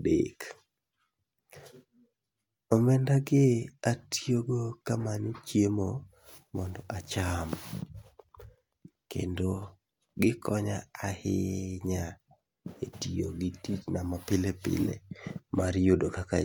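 No technical faults can be heard anywhere in the speech recording, and the signal stays intact and continuous throughout.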